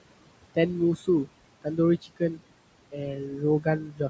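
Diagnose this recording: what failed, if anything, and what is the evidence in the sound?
The failing stage is call processing, specifically the noise suppressor. It applies noise suppressor artifacts to the whole clip, cutting the steady room noise by about 21 dB. That room noise sits about 16 dB under the speech. The background drops away in the pauses and comes back up beneath each phrase, so the floor pumps with the speech. On a spectrogram the noise floor shows dark gaps between phrases and lighter fill under voiced regions. The waveform's quiet stretches fall nearly flat.

There is also speech cut by the noise suppressor, where the gain mask mistook speech for noise. This happens at 0.96–1.08 s (about 12 dB down), 2.02–2.4 s (about 19 dB), 3.16–3.42 s (about 6 dB) and 3.84–4.0 s (about 13 dB). In each case roughly a tenth to a sixth of a second of soft sound is swallowed. A spectrogram shows dimmed or missing patches inside otherwise continuous speech energy, and the waveform envelope shows matching dips. 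Above 8 kHz the spectrogram is empty, which is the call path's normal band limit.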